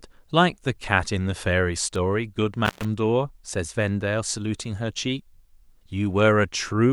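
At 1.96 s there is a bit error spike: a single bit flipped in the digital data, pushing two consecutive samples away from their true values by a power of two before the signal snaps back. It peaks at about −21 dBFS and is heard as one sharp, broadband tick sitting on top of the speech, with no relation to the sound around it. It has no pitch and no decay.

From 2.65 s to 2.85 s an intermittent contact disturbs the line. A loose plug or cable connection briefly lost contact, and for about 118 ms the signal path is open. The speech drops out abruptly and only faint hiss remains in the gap. Crackle marks both edges as the contact breaks and then remakes, so the dropout is framed by rough, scratchy bursts rather than clean cuts.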